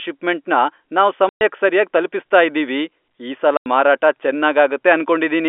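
At 1.29 s, right after "ಷಿಪ್ಮೆಂಟ್ನ ನಾವ್", there's packet loss filled with silence: a 120 ms hole with hard edges. Another 90 ms gap hits at 3.57 s after "ಸರ್ಯಾಗ್ ತಲ್ಪಿಸ್ತಾ ಇದೀವಿ ಈ". Both lengths fit 30 ms packets, over a telephone-band G.711 line.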